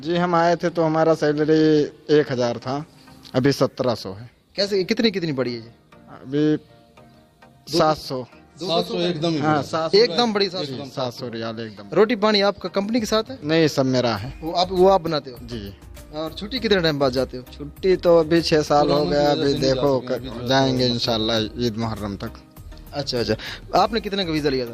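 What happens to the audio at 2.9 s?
Nothing goes wrong at 2.9 s; the audio plays through that moment intact, with no dropout, click, glitch or other fault.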